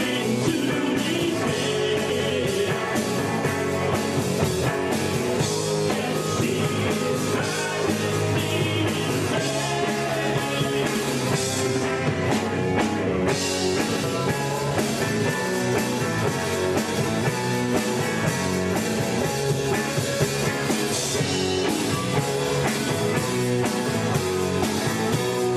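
Frames out of order occur at 2.10 to 2.31 s, 10.87 to 11.03 s and 13.88 to 14.04 s. Each time, two adjacent blocks of frames swapped places before decoding, so the stretch plays with its halves reversed, in blocks of about 104 ms in the first event and about 78 ms in the later two. The result is a brief garbled flutter. No time is dropped.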